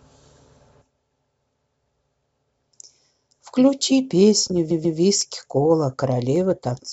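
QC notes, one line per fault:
4.70–4.98 s, repeated frames: a block of about 139 ms plays twice more in a stutter, which fits a handful of compressed frames sent again. The section runs about 279 ms longer.
5.21 s and 6.36 s, dropped samples: each is a single sharp click, a thin vertical line across the spectrum. The likely cause is a tiny fraction of a millisecond of samples missing. The waveform jumps straight to a later value, so no sound is lost.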